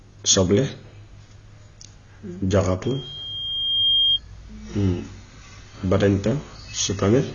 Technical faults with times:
0.00-7.34 AAC compression
2.85-4.19 loudspeaker feedback squeal

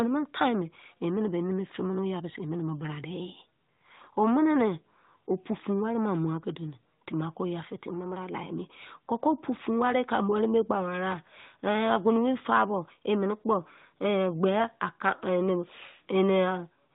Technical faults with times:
none

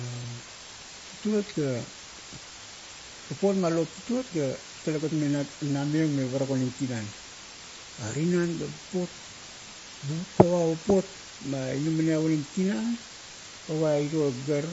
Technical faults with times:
0.00-14.73 low bit depth with dither
0.00-14.73 MP3 compression

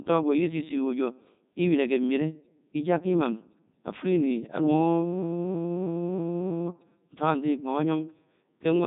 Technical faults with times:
0.00-8.87 Codec 2 vocoder

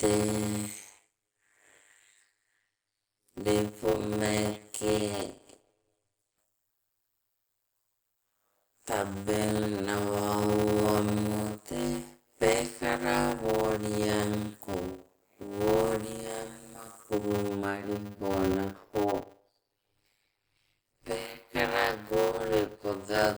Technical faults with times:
0.00-23.38 block size mismatch (padded)

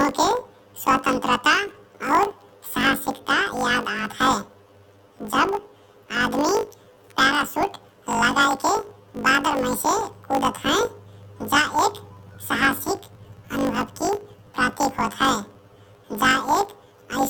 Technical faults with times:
0.00-17.30 planar audio read as interleaved

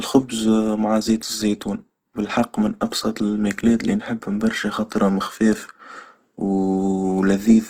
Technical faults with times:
0.00-7.70 Opus compression

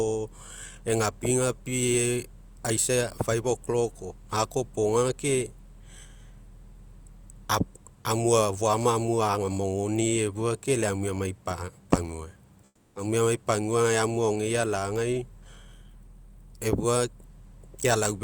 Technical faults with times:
12.65-12.95 comfort noise in place of the background

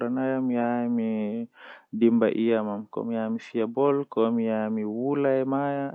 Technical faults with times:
none

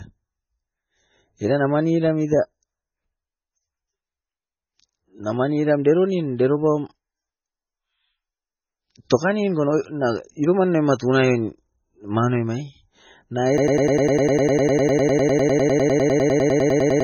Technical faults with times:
0.00-17.03 low-bitrate audio saved at a high bitrate
13.58-17.03 broken-record loop

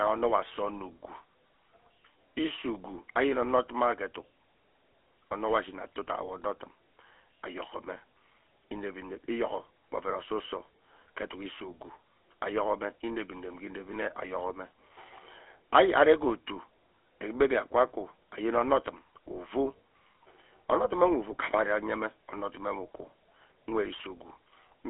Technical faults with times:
0.00-24.89 GSM full-rate codec

